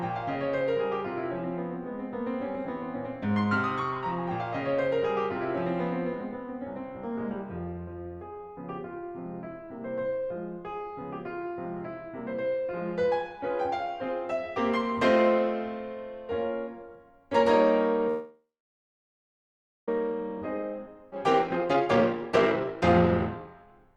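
It's a music clip, and it stalls at 18.08 s. The last sound hangs on and fades, then there's close to 1.4 s of silence before playback resumes at 19.89 s with nothing lost, so it's a call audio freeze, most likely from packets held up until the jitter buffer ran dry. Right after, from 20.12 s to 23.95 s, there's a jitter buffer speed-up: the receiver keeps snipping out tiny pitch-period slices to shed the backlog, so the music runs at about 132% speed with the same pitch and loses its steady tempo, about a second gone in all. In the middle of that, at 21.11 s, there's a skip ahead: roughly half a second is dropped and the two sides are butted together almost seamlessly.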